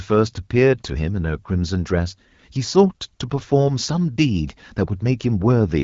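No technical faults can be heard in the speech, which has the bandwidth and light coding texture of the AMR wideband (HD Voice) codec, consistent with a rate of 12.65 kbit/s, with nothing above 7.5 kHz.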